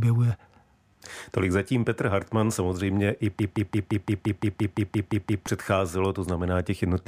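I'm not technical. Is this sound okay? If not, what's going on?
No. From 3.39 to 5.47 seconds the speech gets stuck in a broken-record loop: one tiny slice, 0.17 seconds long, plays twelve times back to back. The playback likely stalled and kept repeating its last scrap, so whatever should have come next is missing.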